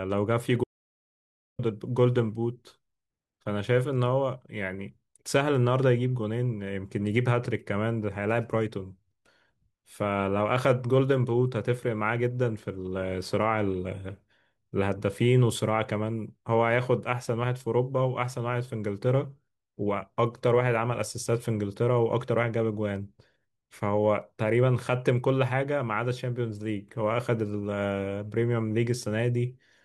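Speech clip with an audio dropout to silence from 0.64 to 1.59 s: the sound cuts off abruptly and resumes mid-flow after about 0.95 s, likely from a briefly lost input. The waveform flatlines and the spectrogram shows a fully blank band, with no room tone.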